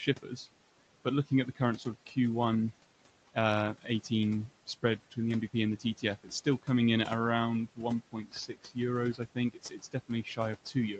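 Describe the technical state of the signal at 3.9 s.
At 3.9 s the speech dips and goes faint, as if part of it were swallowed, sinking by about 15 dB at its deepest. This is speech cut by the noise suppressor, running from 3.76 to 4.11 s, with roughly 150 ms of that span actually pulled down. The suppressor misjudged soft, low-level speech energy as background and attenuated it together with the noise it was removing, so the quiet portion loses presence and level rather than sounding clipped off.

Underneath, the noise suppressor artifacts that run through the whole clip are present here too. The background sinks and swells frame by frame as the suppressor tracks what it treats as steady noise, pushing it down by about 18 dB where it can. The leftover room noise drops between words and rises again under the speech.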